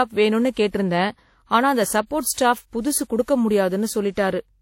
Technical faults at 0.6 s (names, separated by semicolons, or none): transcoding between lossy codecs